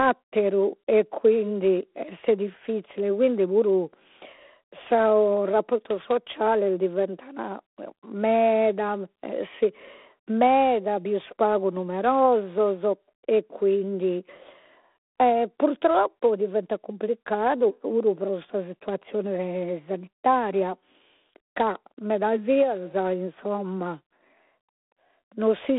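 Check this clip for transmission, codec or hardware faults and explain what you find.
A harsh, rasping hiss runs through the whole speech clip, rising and falling with the level of the talking, over a narrow telephone band of roughly 200 Hz to 3.6 kHz with nothing above 3.9 kHz. This is G.726 ADPCM at 24 kbit/s: each sample is sent as just 3 bits describing its difference from an adaptive prediction, so the quantisation error is coarse and tracks the signal's own loudness, giving that level-following grit.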